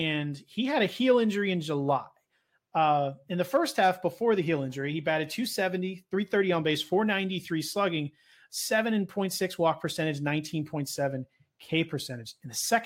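No technical faults can be heard anywhere in the recording.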